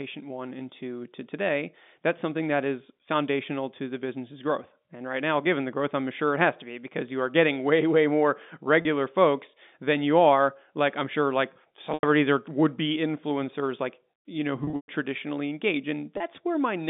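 A speech clip carried over a telephone line, band-limited to about 200 Hz to 3.6 kHz, has four dropouts from packet loss with pitch repetition. The receiver fills each gap by repeating the last pitch period. The brief losses at 8.82–8.85 s and 16.17–16.20 s sound like a slightly held buzz. At 11.94–12.03 s, 90 ms goes missing. From 14.64 to 14.88 s, losses totalling 180 ms are scattered, the longest run 120 ms, so the sound fades toward silence before returning.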